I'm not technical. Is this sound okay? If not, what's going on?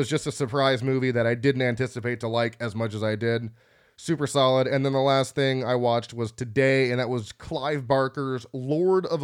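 Yes, nothing stood out as a problem when listening to this recording.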